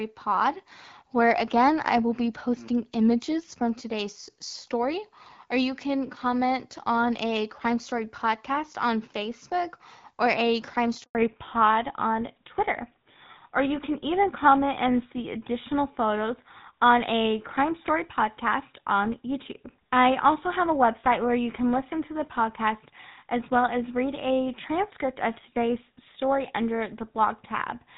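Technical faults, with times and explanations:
11.03 to 11.15 s, handover gap. The sound stops for about 120 ms. The call was moved between networks, and no speech frames arrived during the switch. The sound dies away within tens of milliseconds, then stays silent until the new link carries audio.
11.15 s onward, fallback to narrowband. Nothing above 4 kHz remains after the gap. The lost band points to a drop from AMR-WB HD Voice, likely at 12.65 kbit/s, to GSM full rate. The speech sounds duller and rougher from here.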